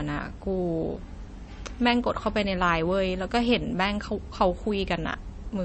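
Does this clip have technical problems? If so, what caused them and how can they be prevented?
Yes. Throughout the speech there is plainly audible damage of the kind MP3 compression leaves, and that is the likely cause. Nothing is present above about 8.3 kHz, so the top end sounds dull. Below that cut-off the sound has a watery, swirling texture. A starved encoder cuts the treble at a fixed frequency and drops quieter frequency components that come and go between frames. This degree of damage fits a low bitrate, somewhere near 33 kbps. To prevent it, keep the original in a lossless format, or encode MP3 at 128 kbps or higher.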